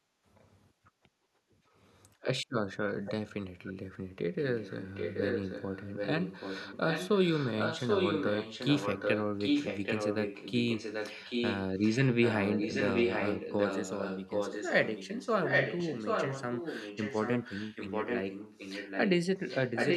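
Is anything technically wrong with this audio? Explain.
Yes. Echo leak: a copy of the speech trailing by 0.78 s appears at 0.39–0.5, 3.05–3.12, 3.66–3.74, 4.41–19.1 and 19.38–19.97 s. It grows from faint scraps to nearly speech level, likely loudspeaker pickup that the far end's echo canceller failed to remove.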